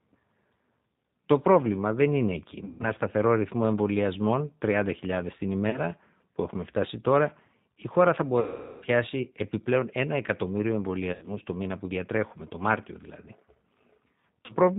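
Throughout, the speech carries G.729 codec damage: nothing above 4 kHz, and a rough, synthetic edge from the low-rate model that rebuilds each 10 ms frame from a filter, pitch predictor and a few pulses. Unlike plain band-limiting, the timbre itself sounds manufactured.

At 2.65 to 2.89 s, between "πρόβλημα δεν είναι εκεί" and "σταθερό ρυθμό εμβολιασμών", VoIP packet loss concealed by the speech codec stretches the last sound into a fading buzzy tone or coloured noise over about 150 ms of missing audio. The same happens at 5.70 to 5.79 s before "που έχουμε φτάσει τώρα", at 8.40 to 8.85 s (the longest, about 420 ms lost), at 11.13 to 11.30 s between "επιπλέον ένα εκατομμύριο" and "το μήνα που διατρέχουμε", and at 14.46 to 14.53 s. A dropout would fall silent instead. Here the decoder keeps extrapolating, and the voice stays weak briefly after each gap.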